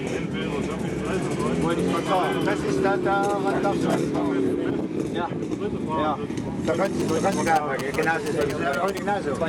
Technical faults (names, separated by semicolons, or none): GSM signalling bursts